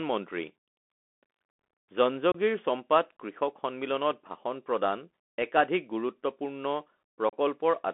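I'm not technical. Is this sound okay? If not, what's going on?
No, it isn't. The whole recording has gone through a Bluetooth CVSD headset codec, the basic link a phone uses with a headset. It sounds narrow and muffled like an old phone line, s sounds turn scratchy, and a grainy hiss sits underneath. Unlike ordinary hiss, it follows the speech.

There are also two brief dropouts, unconcealed Bluetooth headset packet loss. A handful of tiny radio packets went missing and nothing filled the gap. One is at 2.32 to 2.36 s, the other at 7.29 to 7.33 s, right after "ভাষণ প্ৰদান একাধিক গুৰুত্বপূৰ্ণ". They are sharp holes of about 26 ms and 34 ms, not a gradual fade.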